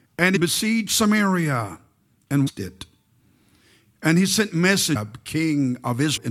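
Damaged data in a compressed stream breaks into this speech clip four times, at 0.35–0.37, 2.46–2.49, 4.95–4.97 and 6.16–6.18 s. At each point corrupted bytes make the decoder misread frames and lose sync, producing a brief glitch of about 22 ms while it finds the next valid frame.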